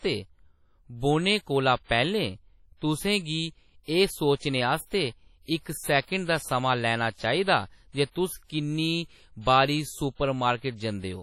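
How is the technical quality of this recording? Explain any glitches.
Quality is poor throughout, with heavy WMA compression artefacts. Across the whole clip, speech sounds washy and ringing, with hiss breathing alongside it and nothing above 18.3 kHz, likely from a coarse encode consistent with about 32 kbps.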